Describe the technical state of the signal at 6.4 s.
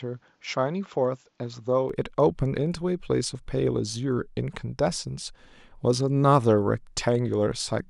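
At 6.4 s the signal is intact, with no dropout, distortion, glitch or other audible fault.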